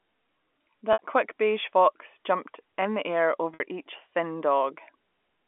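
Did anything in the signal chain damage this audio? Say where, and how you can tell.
Yes, at the network stage: packet loss with pitch repetition, at 0.93 to 0.99 s just before "quick beige fox jumped", and at 3.54 to 3.60 s between "jumped in the air" and "each thin". Each gap lasts about 60 ms, which points to a couple of consecutive lost packets. The receiver filled each hole by looping the last pitch period, so you hear a brief held buzz. On a spectrogram this shows as flat, frozen harmonic stripes. On the waveform it shows as identical repeating cycles that taper before the signal resumes, all within the narrow telephone band of the G.711 line.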